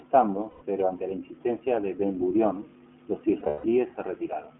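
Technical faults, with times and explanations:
Throughout: iLBC codec. The speech sits in a narrowband line of roughly 200 Hz to 3.4 kHz, so nothing above about 4 kHz survives. The sound is clear but plainly rough and slightly synthetic. Each 20 ms frame's excitation is coded on its own at what sounds like 15.2 kbps. On a spectrogram the energy stops in a hard horizontal ceiling near 3.4 kHz with a thin floor below 200 Hz, and the harmonics look smeared and grainy.
0.50 to 0.64 s: lost iLBC frames. About 120 ms of audio goes missing just before "pero ante la insistencia", which fits six lost 20 ms frames. The decoder fills the gap by repeating the last pitch cycle mixed with noise, so it sounds like a held, faintly buzzy vowel. Because each iLBC frame is independent, the speech recovers cleanly as soon as packets return. A spectrogram shows flat, unchanging harmonic stripes across the gap. 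The waveform shows an evenly repeating periodic shape.
3.40 to 3.68 s: lost iLBC frames. About 200 ms of audio, roughly ten frames, drops out across a 240 ms stretch, with the longest unbroken loss around 150 ms. In that longer run the concealment's repeated pitch cycle fades away into a breathy, decaying tone. Brief snatches of real speech break through between the gaps. On a spectrogram these appear as static harmonic bands that weaken over time, interrupted by short slices of normal varying speech, and the waveform envelope sags where the repetition fades.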